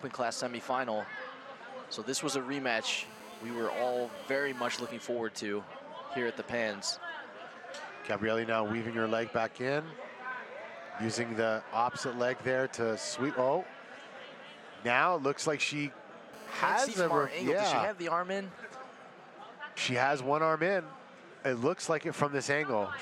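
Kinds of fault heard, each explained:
GSM phone buzz: a 2G handset's radio bursts, rectified in the audio path, add a steady, raspy 217 Hz buzz about 19 dB below the sound.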